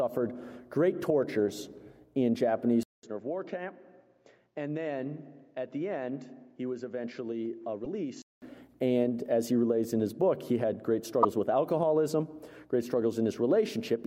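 The audio turns dull from 2.83 to 8.42 s, with a 200 ms gap, nothing above 7.6 kHz, and a drop of about 10 dB. This is likely an input switched to a poorer device. Short glitches at 7.84–7.86 s and 11.22–11.25 s, each about one 24 ms frame long, point to a broken MP3 bit reservoir after lost frames.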